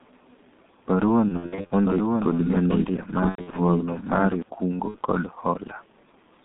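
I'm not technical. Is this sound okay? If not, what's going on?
No, it has a few problems. Throughout, the G.723.1 codec, an old internet-phone format, squeezes the speech hard, so it sounds muffled, hoarse and phone-like, with smudged consonants.

VoIP packet loss concealed by the speech codec happens at 1.28–1.72 s, 3.29–3.59 s and 4.88–4.98 s. Chunks of the call went missing, and the decoder guessed to fill the gaps, giving buzzy or noisy, fading patches.

From 1.84 to 4.42 s there's a doubled audio track. A second copy of the speech plays about a second behind, a bit quieter, likely from the same sound being picked up twice. It starts and stops suddenly.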